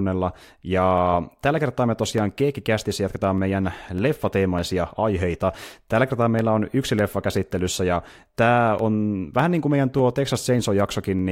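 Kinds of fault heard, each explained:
Clock drift buffer slips: Two ends of the chain likely run on separate clocks that disagree by several hundred parts per million, so the buffer between them creeps until a small block of samples, roughly fifteen, is dropped or repeated to catch up. In this speech the slips recur every 0.6 s from 0.38 s to 11.19 s, about twenty in all, each heard as a brief regular click or tick under the signal.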